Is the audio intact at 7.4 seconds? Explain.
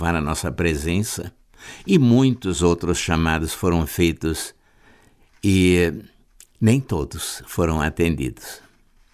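Yes, the speech at 7.4 seconds is intact, with no dropout, glitch or distortion at that point.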